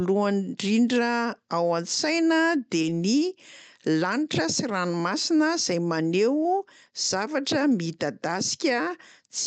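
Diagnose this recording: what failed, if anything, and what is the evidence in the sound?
Short concealed packet loss at 2.81 to 2.85 s, a network fault: audio arrived too late, so the decoder extended the preceding sound for about 20 ms, leaving a brief smear.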